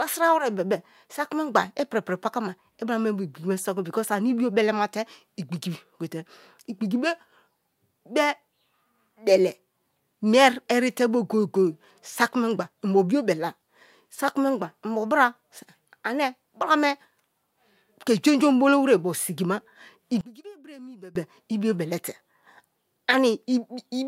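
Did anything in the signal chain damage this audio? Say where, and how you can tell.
Yes. After "obolo were ogbo sigima", from 20.21 to 21.15 s, speech drops about 22 dB, likely from one channel inverted in analogue wiring, cancelling in mono. The waveform collapses and the spectrogram fades across all bands.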